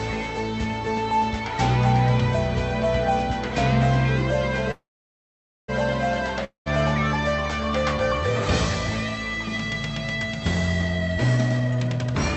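At 4.71 s the sound stops and a fading buzz carries on from the last moment, sinking into near-silence for most of the pause before the audio resumes at 5.70 s, exactly where it left off. This is a call audio freeze, likely caused by packets held up in transit so that the jitter buffer ran dry. What sets it apart from a dropout is that nothing is lost: about 0.97 s of gap has been inserted, and everything after it arrives later than it would have.

From 6.44 s to 6.68 s there is a shorter break: a brief decaying hiss, then about 0.12 s of silence. This is a long network dropout, most probably a stretch of packets that never arrived. Unlike the freeze, the audio does not pick up where it stopped. It rejoins further on, so roughly 0.22 s of material is simply missing, and the gap does not push the rest of the clip later.

From 11.16 s to 12.15 s the audio rushes: it runs at about 127% speed while the pitch stays the same. 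This is a jitter buffer speed-up, where the receiver drains a backlog of queued audio by cutting out many tiny slices of a pitch period or so each, about a third of a second in total. Because the pitch holds steady, this reads as hurried delivery rather than the chipmunk effect of simply playing the audio too fast. Throughout, the Opus call path keeps the audio band-limited to around 8 kHz, at a 64 kbps setting.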